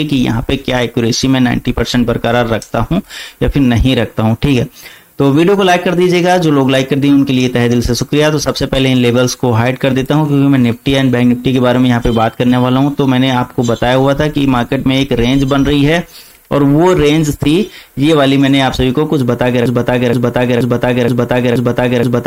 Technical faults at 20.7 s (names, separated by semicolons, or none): low bit depth with noise shaping; broken-record loop